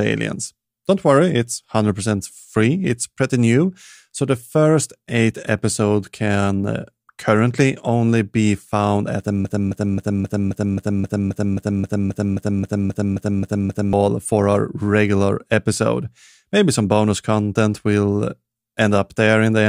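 From 9.45 s to 13.93 s the speech falls into a broken-record loop. Just after "be found at the", a fragment of about 0.27 s repeats exactly, back to back, 17 times, giving a rhythmic stutter. The likely cause is a stall in the player, encoder or stream that kept resending the last fragment it held. Whatever should have been heard in those four and a half seconds is gone, and speech resumes at "for our regular episode".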